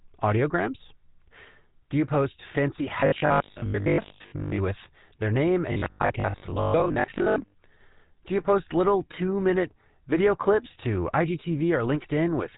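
GSM full-rate codec damage runs through this whole speech clip: the voice has a buzzy, gravelly roughness and nothing above 3.8 kHz, which fits the 13 kbps GSM full-rate coder rebuilding speech from a vocal-tract model driven by sparse, regularly spaced pulses. Robotic sound from repeated short buffers appears from 3.00 to 4.58 s, right after "you post fancy", and again from 5.72 to 7.58 s, following "with their name". Both stretches carry a rigid 50 Hz metallic buzz, likely from the same 20 ms chunk looping while late audio is dropped. Most of the first stretch and about half of the second are repeats.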